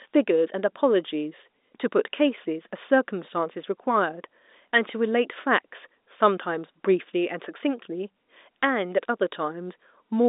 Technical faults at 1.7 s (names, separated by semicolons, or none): none